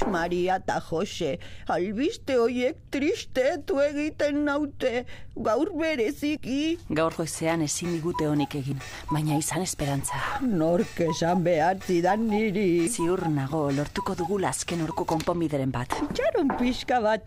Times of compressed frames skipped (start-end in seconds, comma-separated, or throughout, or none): 2.76, 6.36, 8.71, 12.87, 14.91